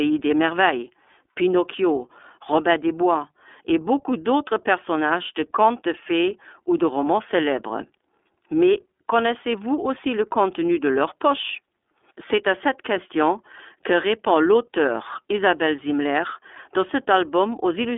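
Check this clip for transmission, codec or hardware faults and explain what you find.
One fault runs through the whole speech clip: iLBC codec coding, from start to finish. iLBC codes each 30 ms frame's excitation on its own, without drawing on the previous frame, and the speech sits in a telephone band of roughly 300 Hz to 3.5 kHz with nothing above 3.7 kHz. The result sounds muffled and boxy, and the codec damage is plainly audible as a rough, slightly synthetic edge on the speech, which fits iLBC's 13.33 kbps mode.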